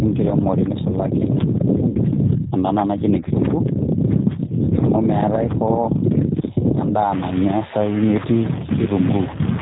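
Throughout, the speech sounds narrowband, slightly rough and synthetic, with nothing above 4 kHz. This is plainly audible G.729 codec damage. The sound fits G.729A at 8 kbit/s. That codec doesn't send the waveform. It rebuilds each 10 ms frame from a vocal tract filter, a pitch predictor and a handful of pulses, so fine detail comes back approximate and the top of the spectrum is simply gone.

From 1.89 to 1.98 s the speech smears into a stretched sound that fades. This is VoIP packet loss concealed by the speech codec. About 60 ms of audio went missing, which points to two lost packets. The decoder filled the gap by repeating its last pitch and filter settings at falling gain. Because each frame is predicted from the one before, the speech stays weak or distorted for a short stretch after real data resumes.

From 7.12 s to the end, a distortion rides on the speech, and the quieter moments fill with a gritty noise floor instead of dropping to near silence. 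This points to a stuck bit, likely from a faulty data line or converter. One bit in every sample is pinned at a fixed value, so roughly half the samples land off by that bit's weight. The error follows the waveform, and small signals near zero keep crossing it, which turns pauses into noise.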